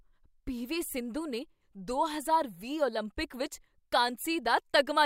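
A short speech recording, with no technical fault to report. Nothing in it needs a time, a value or a cause.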